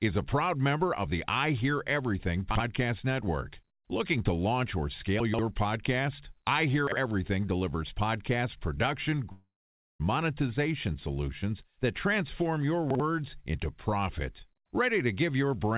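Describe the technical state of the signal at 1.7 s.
At 1.7 s the speech is intact, with no fault present, and the trait heard there is the narrow band of the G.711 A-law call path, which leaves nothing above 4 kHz.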